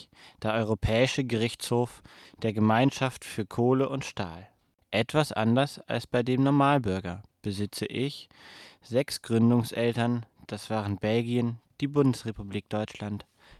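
No technical fault can be heard anywhere in the audio, which keeps a steady, intact signal from its first moment to its last.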